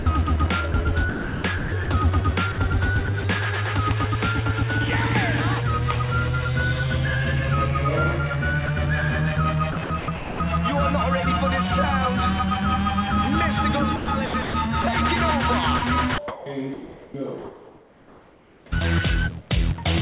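From 0.00 to 0.06 s the opening sound is dropped by the voice detector. About 60 ms is missing, replaced by steady comfort noise. The sender likely judged the onset to be background and did not transmit it. It starts on comfort noise before the real sound arrives.

From 0.72 to 1.88 s the sound is chopped by the voice detector. The sender likely switched in and out of transmission several times. About 540 ms is replaced by comfort noise. It sounds choppy.

From 2.52 to 3.24 s the sound is chopped again. About 100 ms of sound is replaced, likely by the detector gating quiet edges. The gaps are brief.

From 8.66 to 8.68 s the sound drops for about 20 ms. The detector likely mistook a quiet moment for background. A short patch of comfort noise fills it.

From 9.72 to 10.4 s the sound is chopped, likely by the same detector. About 420 ms is swapped for comfort noise. The result is broken and uneven.

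From 13.96 to 14.84 s it chops again, with about 340 ms replaced. The likely cause is the detector cutting in and out.

From 15.78 to 17.14 s comes the longest chopped stretch. About 660 ms is replaced, likely by repeated detector switching.

Throughout, nothing is heard above 4 kHz. That fits a G.711 mu-law call path at 64 kbps.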